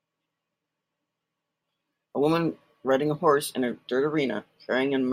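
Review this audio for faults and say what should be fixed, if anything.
Nothing stood out on listening to this speech recording, so there is nothing here that needs fixing.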